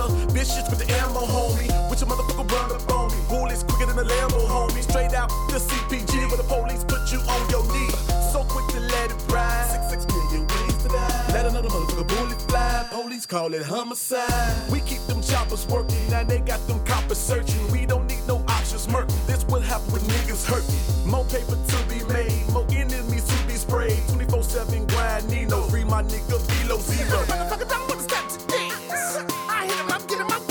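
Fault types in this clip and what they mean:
feedback whistle: a thin, steady 4.7 kHz tone from 9.70 to 16.40 s, around 20 dB under the sound, likely a loudspeaker-to-microphone loop sitting just short of runaway.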